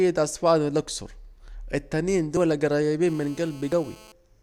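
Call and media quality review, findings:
Dropped buffer (overrun) at 2.37 s: abrupt jump in the speech, no gap of silence. About 20 ms skipped. Likely capture-side overrun, where the app read too late and the hardware overwrote unread samples.

Dropped buffer (overrun) at 3.72 s: same skip, about 20 ms lost, inside the buzz below. Audio is spliced, not muted, which separates it from a dropout or underrun gap.

GSM phone buzz, 3.07–4.12 s: steady raspy buzz at 217 Hz, harmonic-rich, about 25 dB below the speech. A nearby 2G handset on a call, with its bursts rectified in the analog input. Fixed 217 Hz pulse rate, not mains hum's 50/60 Hz.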